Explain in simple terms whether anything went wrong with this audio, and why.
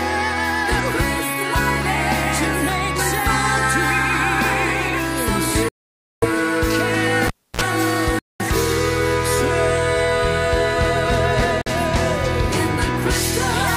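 The sound cuts to silence three times: at 5.69 s for about half a second, at 8.19 s for about 0.2 s, and at 11.62 s for about 0.05 s. These gaps are likely a Bluetooth stall, where the wireless link ran out of audio to play.

At 7.27 s, a cable pulled and plugged in causes a pop and about 0.3 s of near silence, including a brief 60 Hz mains buzz. A second pop follows as the sound returns at 7.61 s.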